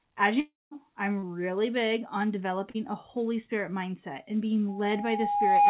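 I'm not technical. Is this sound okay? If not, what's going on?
No. There are three separate problems in this speech recording.

From 0.4 to 0.73 s, the sound stalls. The last bit of voice is stretched into a fading buzz, then there is a moment of near silence, and the speech picks up again with about a third of a second gone for good. That is most likely a long network dropout. It differs from the short glitches below because the gap is long enough to hear silence, not just a blur.

At 1.19 to 1.24 s and again at 2.70 to 2.76 s there are tiny smears, each only a few hundredths of a second. This is short concealed packet loss: small pieces of the call arrived too late, and the receiver patched each hole by briefly continuing the previous sound. Unlike the dropout, nothing goes quiet. You just hear a quick wobble.

From 4.68 s to the end, a steady whistle at about 818 Hz swells over roughly a second until it is much louder than the speech. 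This is loudspeaker feedback squeal: a microphone is picking up its own loudspeaker, and the sound loops round and builds on itself. Network problems make sound go missing, but feedback adds a single growing tone.

The dull, telephone-like tone, with nothing above 4 kHz, comes from the phone-call connection itself.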